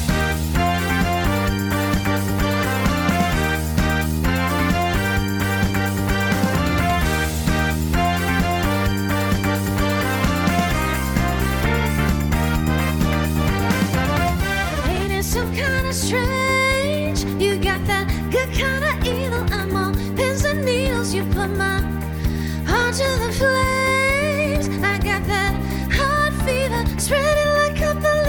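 No technical faults can be heard in the signal at any point.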